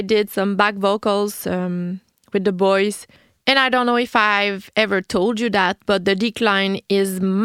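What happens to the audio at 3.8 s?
Nothing goes wrong at 3.8 s; the speech carries on intact through that moment.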